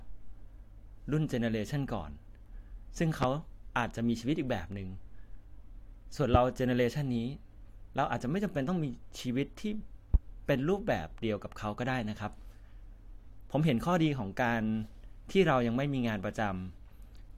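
A speech recording with two loud pops, sharp thumps sitting well above the voice, peaking around 20 dB over it, at 3.23 to 3.26 s and 10.14 to 10.17 s, with the speech continuing underneath. Each is likely a sudden voltage pulse from a plug, switch, static discharge or driver glitch.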